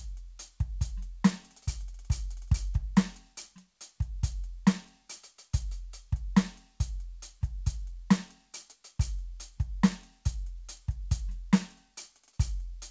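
No technical faults can be heard anywhere in the music. It has passed through a call path whose codec leaves nothing above 8 kHz, which fits a wideband codec such as G.722, and that path is working as it should.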